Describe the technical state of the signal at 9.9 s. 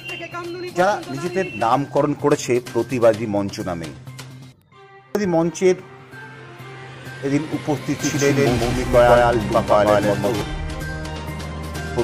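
A doubled audio track runs from 7.99 to 10.41 s: a second, equally loud copy trails by roughly 150 ms, likely from a slower capture path.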